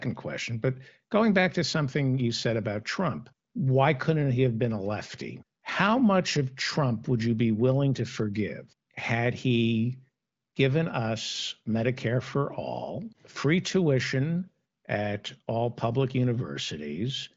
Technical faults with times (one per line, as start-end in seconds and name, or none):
none